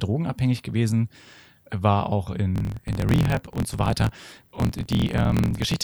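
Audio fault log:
2.53 to 5.84 s, block size mismatch (truncated): From just after "war auch", each block's tail is discarded. A 43.1 Hz buzz follows the block rate, which fits 1024-sample reads. The sound runs about 1.12 times fast, with its timbre intact.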